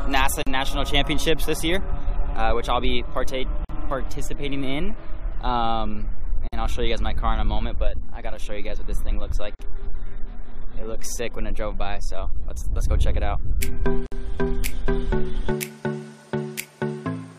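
Gaps at joins of encoded pieces occur at 0.43, 3.65, 6.48, 9.55 and 14.06 s, lasting 38 to 56 ms. Each piece was encoded separately, and the encoder's start delay and end padding were left in at every join. The sound falls into a brief gap or deep dip with smeared edges, then resumes exactly where it stopped.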